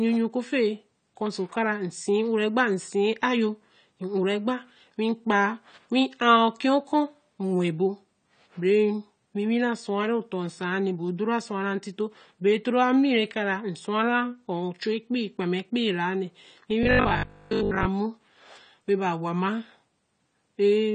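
AAC compression affects the whole speech recording: nothing is present above 9 kHz, and the dull, smeared, fizzy texture likely comes from AAC-LC coding at a low bitrate near 32 kbps. Robotic sound from repeated short buffers appears from 16.83 to 17.87 s as a rigid metallic buzz at 50 Hz, likely from 20 ms chunks replayed in place of most of the real audio.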